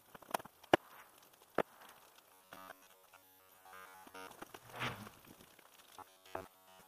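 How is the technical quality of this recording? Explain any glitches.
The recording has two stretches of robotic sound from repeated short buffers, from 2.33 to 4.27 s and from 5.99 s to the end at 6.87 s. In both, the sound collapses into a rigid, metallic buzz at a fixed 93.8 Hz that still loosely tracks the underlying sound. The likely cause is audio arriving too seldom, so the playback repeats a snippet of about 10.7 ms, which fits a buffer of that length. Roughly two-thirds or more of the real audio is skipped. Unlike a mains hum, this buzz doesn't sit beneath the material. It replaces it, and its pitch never moves.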